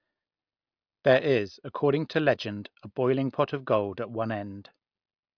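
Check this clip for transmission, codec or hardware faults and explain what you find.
Nothing wrong turns up here; this bit of speech comes across without any transmission, codec or hardware trouble to point to.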